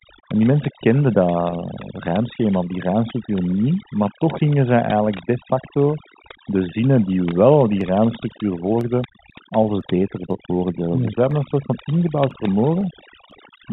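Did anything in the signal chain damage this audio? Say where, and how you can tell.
Yes. Throughout the speech the pauses drop to near silence with faint twinkling specks. That is overdone noise removal at the call-processing stage: a suppressor set too hard is muting individual frequency bands near its noise estimate and taking quiet voice detail with them.

At 1.5 s, right after "die mensen kenden", there is a brief held, buzzy note lasting about 20 ms. This is packet loss with pitch repetition on the network path. The receiver bridged the gap by repeating the last pitch period, which fits two lost 10 ms packets.

From 7.31 s to 13.31 s, starting after "facto de zinnen die", there are regular small ticks about every 0.5 s, roughly fifteen in all, each a sub-millisecond skip in the audio. These are periodic USB or driver dropouts: something stalls the driver or buffer on a fixed schedule, and the missing samples are jumped over rather than filled. 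The G.711 telephone coding band limit sits beneath all of this without adding damage of its own.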